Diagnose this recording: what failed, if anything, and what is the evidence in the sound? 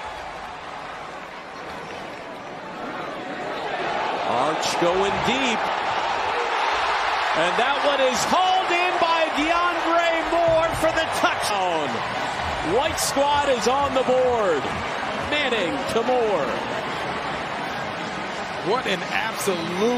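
The compressed stream lost whole frames at the codec or storage stage. At 2.59 s, 5.67 s and 11.50 s the decoder had nothing usable for a run of frames, either because they were missing from the file or because it rejected them as damaged, and it resumed at the next good frame. Each time, the audio jumps forward by about 150 ms at the first two points and about 400 ms at the third, with an audible join. The jump sizes fit whole multiples of a roughly 26 ms frame, which identifies this as compressed frames skipped.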